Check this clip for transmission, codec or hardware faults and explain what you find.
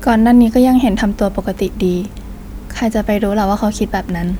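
Nothing here jumps out as a fault, so there's nothing to report for this bit of speech.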